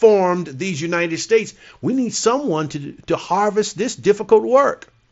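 The speech has no technical faults and comes through a wideband Bluetooth headset link of the mSBC kind, with content reaching up to about 7.7 kHz and nothing above it.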